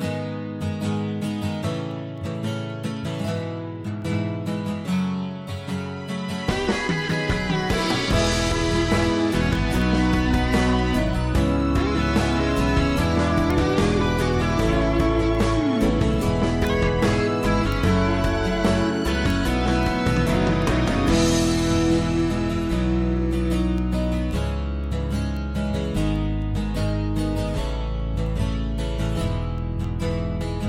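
From 0.33 s to 30.63 s the audio carries word clock ticks: short, sharp clicks at a steady rate of roughly three per second, about a hundred in total. The receiving device is running on its own clock rather than locking to the digital source, and the two clocks disagree by something on the order of 100 ppm. Each time they drift a full sample apart, a single sample is dropped or repeated, producing one tick.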